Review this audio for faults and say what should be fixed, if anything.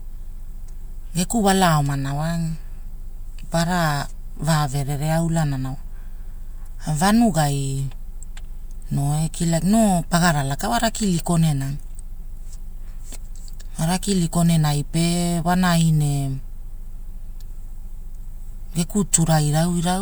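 No faults turn up in this audio, and nothing needs to be fixed.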